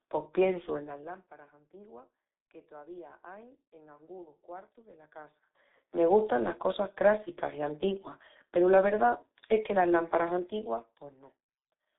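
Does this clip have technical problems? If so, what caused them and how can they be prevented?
Yes. G.723.1 codec damage throughout: nothing above 3.8 kHz, heavy hoarse, muffled speech, fitting roughly 6.3 kbit/s, 30 ms frames. Use a wideband codec at higher bitrate.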